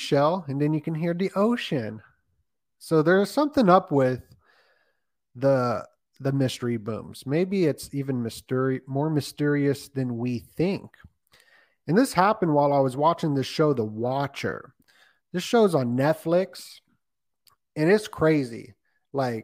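Listening to this speech recording, nothing stood out as a technical problem at any point.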